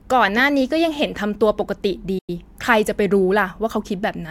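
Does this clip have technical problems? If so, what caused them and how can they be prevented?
Yes, there's a digital broadcast dropout from 2.18 to 2.30 s. The receiver stopped getting good frames, faded out over about 8 ms, and muted, so roughly 96 ms of speech is simply gone, which fits about three lost frames. A stronger, steadier signal or better error protection would prevent it.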